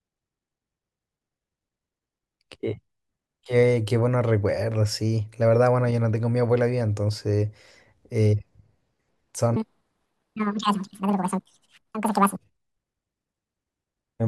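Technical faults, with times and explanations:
9.56–12.36 s: section at the wrong speed. This stretch of speech plays at 1.91 times its recorded rate, so pitch jumps by about ten semitones and delivery turns high and hurried. Speed and pitch shift together, likely from an editing or playback clock mismatch.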